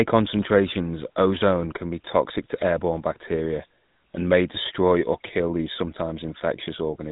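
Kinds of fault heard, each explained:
GSM full-rate codec: The speech has been carried through the original GSM full-rate coder, which models the voice as a vocal-tract filter fed by a sparse train of evenly spaced pulses and throws away two of every three excitation samples, a loss that fits its 13 kbps rate. Throughout the clip this produces a plainly audible buzzy, gravelly roughness. Nothing above 3.8 kHz remains, so sibilants and upper brightness are missing.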